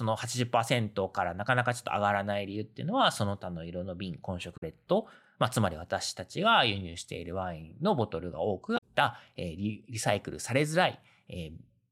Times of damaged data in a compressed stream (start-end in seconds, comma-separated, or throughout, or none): 4.53-4.63, 8.74-8.82